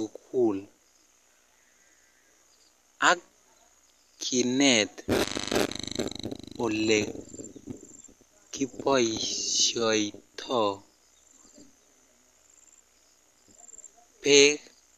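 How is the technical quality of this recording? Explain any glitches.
No technical faults can be heard anywhere in the recording. There are no glitches to explain.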